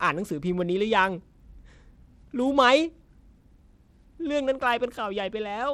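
Throughout the speech, the treble thins out and flickers. A gritty noise rides on the sound. The likely cause is Bluetooth SBC compression at a low bit pool, which fits about 96 kbps. Its top sub-bands get too few bits, and the rest are coarsely quantised.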